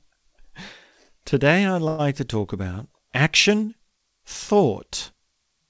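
From 1.88 to 2.02 s, packets were likely held up in transit, so the jitter buffer ran dry and the receiver had to cover the gap itself. It extended the last sound for about 108 ms as a short buzzing or hissing, fading fill with no silence, and then the speech resumed exactly where it had stopped. This is a call audio freeze: nothing is lost, but everything after it arrives about 108 ms later. Throughout, the call path is band-limited, with nothing above 8 kHz, consistent with G.722.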